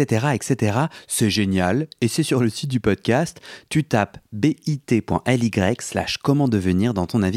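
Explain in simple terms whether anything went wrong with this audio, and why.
Nothing went wrong here: the speech comes through as a steady, unbroken signal, and no technical fault can be heard anywhere in the clip.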